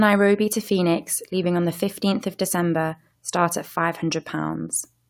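No technical faults can be heard anywhere in the recording.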